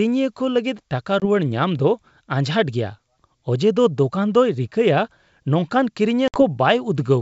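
Hard-edged silent gaps at 1.20 to 1.26 s and 6.28 to 6.43 s are followed by slightly distorted speech. This is packet loss on an ADPCM call: about 20 ms, then 60 ms, went missing, desynchronising the decoder's predictor and step size until they resettled.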